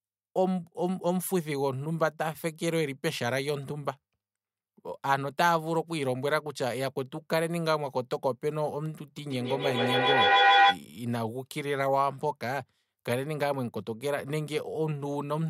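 At 9.17 s a feedback howl starts in the speech. It climbs to about 8 dB above the talking, near 700 Hz, with a loop delay of roughly 150 ms. A microphone-to-loudspeaker loop gained level each pass. It stops at 10.82 s.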